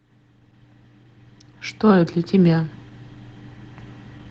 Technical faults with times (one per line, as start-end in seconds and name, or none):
0.00-4.30 Opus voice compression